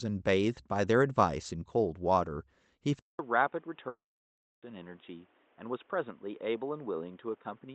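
At 2.99 s the sound briefly goes silent for 200 ms, then returns duller, boxier and roughly 5 dB quieter, with a new noise floor only about 35 dB down. This is likely an input switched to a poorer device. On a spectrogram, energy stops abruptly at 3.8 kHz from this point on, below the wider band the Opus call path carried before.

From 3.88 to 4.63 s, a long network dropout likely removed 740 ms of audio. The last sound continues as a brief fading buzz, then 660 ms of near-silence. The waveform shows a short decaying tail, then a flat line before the audio resumes with that stretch missing.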